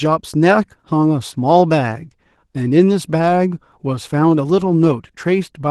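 Opus voice compression runs through the whole speech clip, and its damage is plainly audible. The sound points to a low rate of about 16 kbps in hybrid mode, with the linear-prediction SILK layer carrying the lower band and a CELT layer adding content above 8 kHz at full bandwidth. At that rate the excitation is coded coarsely, giving the voice a hoarse, slightly robotic texture, with processing that fits 20 ms frames.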